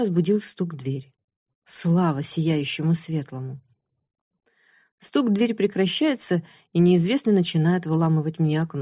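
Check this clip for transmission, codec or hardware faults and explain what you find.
No faults found.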